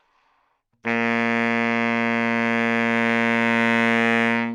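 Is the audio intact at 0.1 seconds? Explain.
Yes, the audio is intact at 0.1 s, with no audible fault at that moment.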